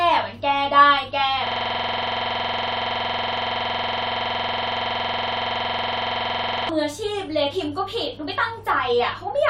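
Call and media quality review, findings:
System hang loop, 1.47–6.69 s. Host or audio driver stalled while the playback hardware kept replaying its ring buffer. One 46.44 ms slice of speech repeats exactly about 112 times, which fits a 2048-sample buffer. Audible as a rough, steady 21.5 Hz buzz for over five seconds.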